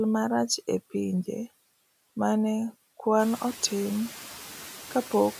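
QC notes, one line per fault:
Throughout, noise suppressor artifacts: frame-by-frame gain cuts of about 10 dB on noise-judged bands, so the room noise (rising around 3 s) sinks between words and swells under them.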